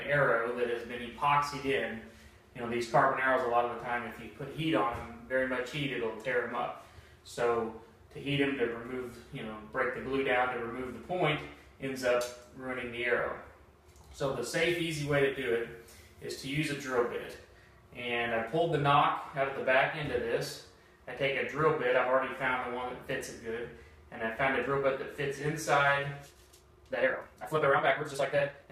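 From 14.69 to 17.33 s there's pre-emphasis left on: the treble lift matches the CD 50/15 µs curve, about 8 dB up at 10 kHz relative to 1 kHz, and nobody applied the matching de-emphasis, so that stretch turns thin, bright and hissy-sibilant.

Then from 26.20 s to the end at 28.71 s the pace suddenly jumps to roughly 1.84 times normal while the pitch holds steady, sounding rushed. That's likely a time-stretched section, squeezed to fit by dropping short slices.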